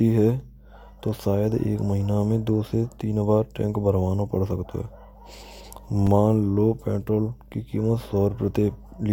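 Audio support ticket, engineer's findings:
Block of digital silence at 6.07 s in the speech: single sharp tick, a 5.3 ms drop to silence with hard edges, which fits one unfilled 256-sample output buffer. Probable component: audio callback missing its deadline. Distinct from a packet-loss gap or dropout: no fade, no concealment smear, just an instant cut to silence and back.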